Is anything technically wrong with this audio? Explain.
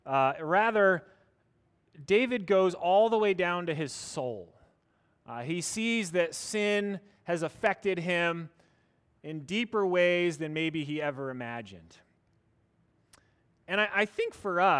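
No, nothing technically wrong can be heard in this speech recording. There are no faults to describe at any point in the audio.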